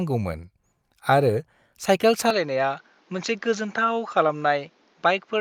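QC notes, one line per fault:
2.30 to 5.40 s, input switched to a poorer device. At 2.30 s the speech turns duller and boxy, with no gap at the change. Nothing is heard above about 7.2 kHz from then on, so the top end sounds clipped off. The level drops by a few decibels. A new, faint background noise sits well below the speech. The likely cause is the recording moving to a narrower-band microphone with its own tone and noise.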